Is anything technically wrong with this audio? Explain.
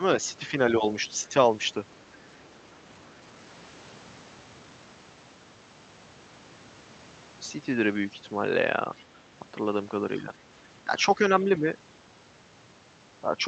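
Yes, there are two echo-control faults in this speech, consistent with a call path limited to about 8 kHz.

Speech suppressed in double talk occurs at 0.38–0.54 s, 0.71–0.84 s, 10.18–10.34 s, 10.85–10.91 s and 11.16–11.65 s. The talker's level dips briefly, by about 5 dB in the shallower cases and about 10 dB at 0.71 s and 10.85 s, with each dip lasting under a quarter second. The likely cause is an echo canceller that cannot tell near-end speech from loudspeaker echo while both sides talk and attenuates everything.

The other side's voice is leaking through at 1.13–1.17 s, 2.01–2.18 s and 8.96–9.05 s. These are faint, short fragments of a second voice, about 35 dB below the main speech in the first two and about 30 dB below at 8.96 s. This is likely residual acoustic echo that the canceller did not fully remove from the microphone signal.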